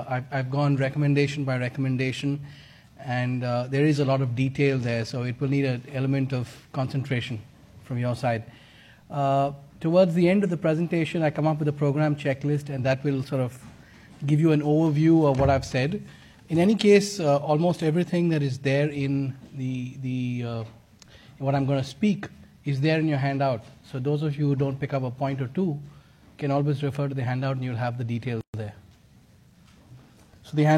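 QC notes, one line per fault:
28.41–28.54 s: gap at a join of encoded pieces, a 129 ms silence with smeared edges where untrimmed encoder delay and padding remain.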